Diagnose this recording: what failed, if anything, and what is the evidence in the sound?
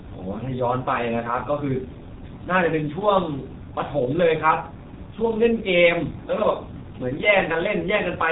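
The failure is at the codec stage: G.723.1 coding throughout the speech. Nothing above 4 kHz survives, so the sound is muffled. Consonants smear and the voice turns hoarse. The coarse 30 ms frames and slow model updates suggest a rate near 6 kbit/s.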